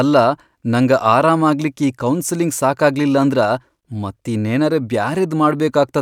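A speech recording with no technical fault to point to. Nothing in it calls for a time stamp or a cause.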